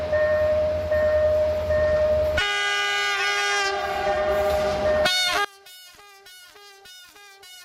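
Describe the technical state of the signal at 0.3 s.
At 0.3 s the signal is intact, with no dropout, distortion, clipping or other fault audible at that moment.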